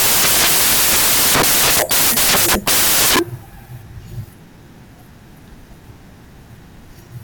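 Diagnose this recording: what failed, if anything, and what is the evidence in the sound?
The failure is at the sample-format conversion stage: samples built from the wrong bytes, present from start to finish. The whole recording is loud, harsh broadband noise, close to white on the louder speech. The reader is misassembling each sample, so the rapidly changing low-order bits end up as the dominant part of every value. Unlike a sample-rate error, there is no pitch or tempo shift.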